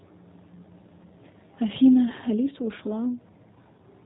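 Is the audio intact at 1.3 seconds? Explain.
No, G.729 codec damage runs through the whole clip: speech rebuilt from a vocal-tract filter and sparse pulses sounds rough and synthetic, consistent with 8 kbit/s G.729A, and the spectrogram shows nothing above 4 kHz.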